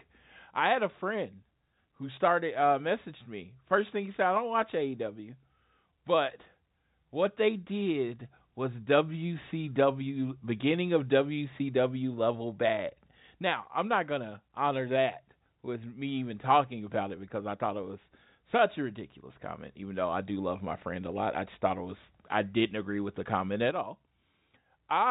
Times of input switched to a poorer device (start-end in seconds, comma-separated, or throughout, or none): none